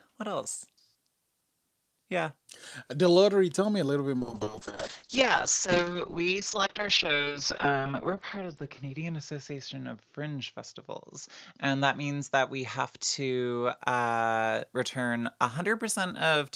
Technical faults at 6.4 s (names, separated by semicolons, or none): call bitrate drop